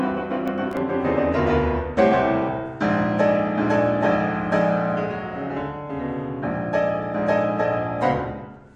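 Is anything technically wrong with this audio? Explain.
Yes. From 0.48 to 0.77 s the music carries processor overload crackle. The processor missed a handful of very short buffer deadlines in a row, replaying stale audio with hard edges each time. Unlike a single dropout or clipping, it is a gritty burst that stops once the load eases.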